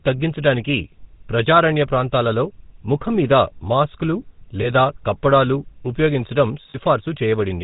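The speech has passed through the GSM full-rate codec, which fits a 13 kbps full-rate coder. It rebuilds the voice from a vocal-tract model driven by regularly spaced pulses and keeps only a fraction of the excitation detail. Nothing above 4 kHz survives, so the audio is band-limited and carries a plainly audible buzzy, gravelly roughness from start to finish.

Two dropouts come from lost GSM frames. The decoder fills each gap by repeating the settings of the last good frame. From 4.62 to 4.69 s, right after "ప్రాంతాలలో ముఖం మీద మాస్క్లు" and before "కప్పడాలు ఉపయోగించడం", a brief rough, metallic ring holds the sound. That fits a single missing 20 ms frame. From 6.7 to 6.77 s, just after "కప్పడాలు ఉపయోగించడం", the same smeared, ringing hold returns. That points to about 40 ms lost across two frames.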